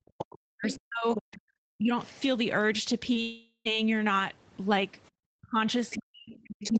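From the start to 1.92 s the speech sinks by up to about 40 dB in pieces, for roughly a second and a half altogether. This is likely speech suppressed in double talk, where the echo canceller, faced with both sides talking, turned the local talker down as well. Unlike a network gap, the sound dips and thins rather than being replaced.

Between 0.71 and 1.39 s a second, fainter voice is audible, about 10 dB below the main speech. This is likely the other side's voice leaking through: echo from the loudspeaker that the canceller failed to remove. It sits alongside the talker, so it differs from the suppression, which only removes sound.

At 3.13 to 3.17 s there is a short concealed packet loss. About 20 ms never arrived, and the decoder covered the hole by extending the preceding sound, so it registers as a brief smear rather than a silence.

From 3.21 to 3.67 s comes a long network dropout, likely from the network. 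About 440 ms is missing, and the filled-in sound continues the last sound and fades until about 70 ms of silence is left. The speech then resumes further on, with that part gone. Its length and the silence set it apart from the short loss before it.

From 5.38 s to the end the double-talk suppression returns, with drops of about 40 dB, and from 5.91 s the other voice leaks through again at about 10 dB below the speech. Throughout, the call codec's 8 kHz bandwidth limits the top end, which is normal for this path.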